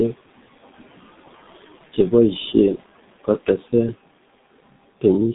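A noise suppressor runs throughout the clip, pulling down whatever bands it judges to be steady noise by about 16 dB. The room noise, about 19 dB below the speech, dips in the gaps and returns beneath the speech.

The speech also passes through the G.723.1 codec with heavy damage. The muffled, hoarse quality points to its roughly 6.3 kbit/s mode. The line carries only about 150 Hz to 3.7 kHz, so the top end is gone, and the slow-updating voice model blurs the consonants.

From 2.75 to 2.80 s, VoIP packet loss concealed by the speech codec interrupts the audio. The gap fits a single lost 30 ms frame. The decoder fills it by extending its last pitch and filter at falling gain, which produces a brief fading fill, and the speech sounds weak as it recovers.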